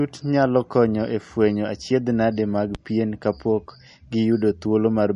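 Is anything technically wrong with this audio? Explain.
Yes, there are two faults. Throughout the speech the sound is plainly watery and swirly, with nothing above 10.6 kHz, likely from MP3 compression at a low bitrate, around 40 kbps, that discards weak frequency lines. From 2.75 to 2.79 s a single loud pop, roughly ten dB above the speech, sits on top of the audio, likely from a sudden voltage pulse such as a switch or static discharge.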